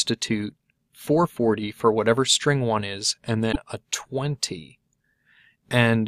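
Damaged data in the compressed stream from 3.49 to 3.56 s makes the decoder lose frame sync, producing a brief 70 ms blip.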